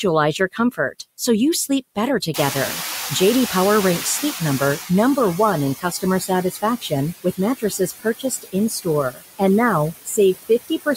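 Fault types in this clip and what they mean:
Noise suppressor artifacts: The suppressor pulls the steady background down by about 14 dB frame by frame throughout, so the noise dips in the gaps and comes back up under the talking.
Speech cut by the noise suppressor: Quiet bits of speech get mistaken for noise and pushed down with the background, by about 11 to 19 dB. You'll hear swallowed, faint speech at 0.39–0.95 s (just before "so you"), 1.69–3.11 s (just after it), 5.8–6.92 s, 7.24–9.41 s, and from 10.05 s to the end.
Noise suppressor catching up: The room noise jumps by roughly 24 dB around 2.5 s. The suppressor's estimate lags, so from 2.34 s the louder noise leaks through and only settles to about 11 dB of reduction after roughly 2.5 s, around 4.89 s.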